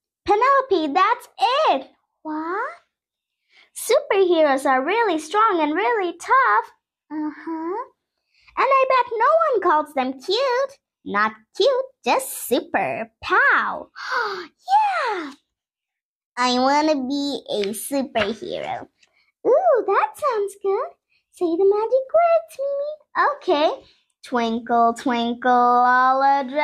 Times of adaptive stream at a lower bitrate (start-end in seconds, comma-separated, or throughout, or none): none